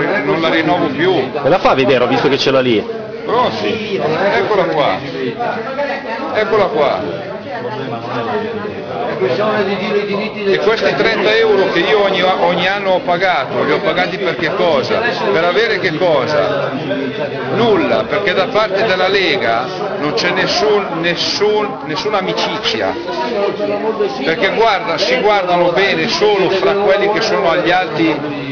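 Aliasing runs through the whole clip. Content above 5.5 kHz has folded back down into the band instead of being removed, which fits a downsample to about 11 kHz from a much higher rate with no anti-alias filter. The folded energy sits only around 15 dB below the real signal, so high sounds turn gritty and metallic, with false tones that don't follow the true pitches. A clean rate reduction would only sound duller; here the spectrum stays busy right up to the 5.5 kHz edge.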